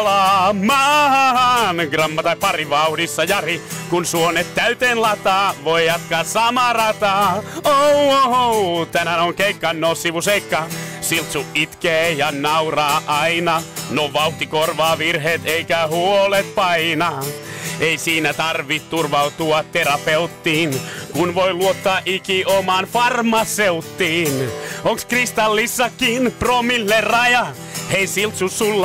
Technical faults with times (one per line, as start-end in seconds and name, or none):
none